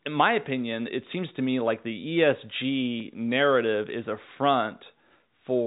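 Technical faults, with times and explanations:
The speech sits in a G.711 A-law telephone channel at 64 kbps, with its bandwidth topping out near 3.8 kHz and only the faint level-following quantisation hiss expected of that format, and no technical fault occurs at any point.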